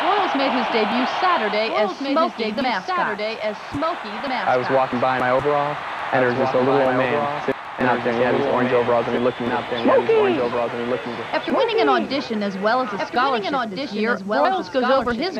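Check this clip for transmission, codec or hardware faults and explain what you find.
One fault runs through the whole clip, a doubled audio track. A dry, full-band copy trails about a second and a half behind, roughly 5 dB quieter, likely from a second capture path or an out-of-step edit.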